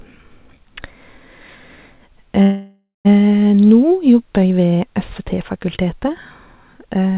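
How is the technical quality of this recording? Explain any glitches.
The recording has one clear glitch, a call audio freeze, and comes through a narrowband phone-style path with nothing above 4 kHz. From 2.42 to 3.07 s the speech stalls into a fading buzz that ends in about 0.16 s of silence, then resumes where it left off. The likely cause is delayed packets draining the jitter buffer, so the receiver stretched the last sound to fill roughly 0.63 s and nothing was lost.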